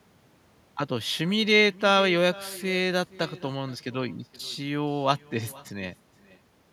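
Echo with no canceller runs through the whole clip. Each stretch of speech returns roughly half a second later as a faint copy, about 21 dB below the direct sound, thin in tone. The far end appears to be playing the call over a loudspeaker while its microphone picks that playback up, and nothing in the path strips it out before sending it back across the network, so every phrase trails its own delayed ghost.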